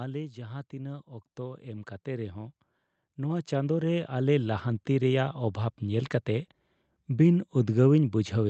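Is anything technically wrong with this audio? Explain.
Yes. There is automatic gain rising from 0.34 s to about 6.1 s. The automatic gain control judged the incoming level too low and kept raising its gain, by about 16 dB in total across those nearly six seconds. Because the gain acts on the whole signal, the speech and the background noise swell together in a slow, steady climb. There are no abrupt jumps. The sound simply grows louder until the rise levels off. The audio also passed through a call codec, with high frequencies cut off above 8 kHz.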